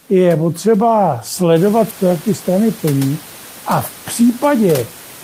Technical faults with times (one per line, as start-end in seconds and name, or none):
none